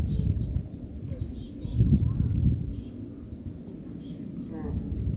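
Nothing is technically wrong with these sounds.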